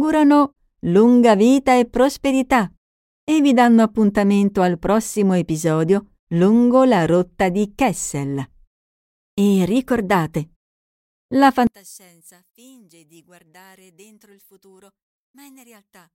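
From 11.67 s to the end, the speech nearly vanishes in mono, about 30 dB down, leaving a faint trace, likely one channel inverted cancelling the shared centre.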